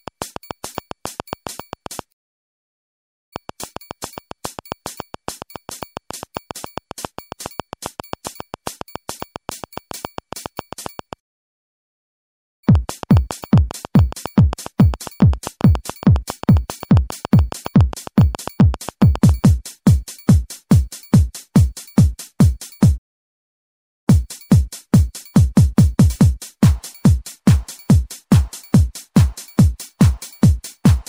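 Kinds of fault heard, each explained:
Train of clicks: From 0.08 s to 19.45 s a regular ticking runs over the sound at about 7.3 clicks per second, around 150 in all. The clicks peak at about 5 dB above the signal and carry on through the pauses. The likely cause is interference from nearby equipment or a faulty connection or power supply repeatedly injecting the same pulse. A waveform shows evenly spaced needle-like spikes, and a spectrogram shows thin vertical lines spanning the frequency range at steady intervals.
Playback stall: The sound stops abruptly mid-flow three times, from 2.11 to 3.33 s (1.2 s), from 11.19 to 12.64 s (1.43 s) and from 22.97 to 24.08 s (1.09 s), and then resumes. This is likely the player running out of data or having its thread blocked, so the output falls silent until it recovers. On a waveform each stall is a flat, silent gap, and on a spectrogram it is a blank vertical band empty at every frequency.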